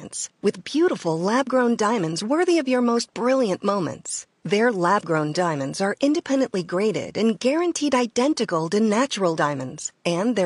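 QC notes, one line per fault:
Nothing to flag here, just speech with a bit of room noise sitting about 45 dB underneath it.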